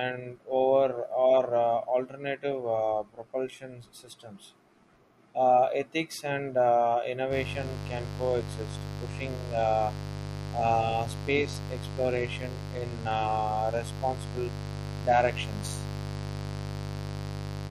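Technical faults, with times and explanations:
7.29–17.70 s, mains buzz: After "ethics and uh", a steady raspy buzz runs to the end, about 10 dB below the speech. Sharp switching spikes from the 50 Hz mains spread harmonics up into the kilohertz range.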